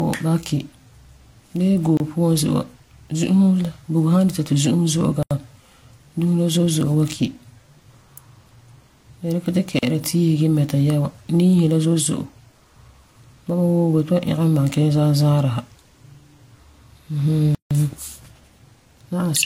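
Speech with a doubly processed texture and nothing above 16.6 kHz, likely from transcoding between lossy codecs. It sounds like low-rate HE-AAC re-encoded to Vorbis, with both sets of artefacts stacked. On top of that, there are four blocks of digital silence with hard edges, at 1.97 s (28 ms), 5.23 s (80 ms), 9.79 s (40 ms) and 17.55 s (160 ms). They sound like output buffers not being filled in time.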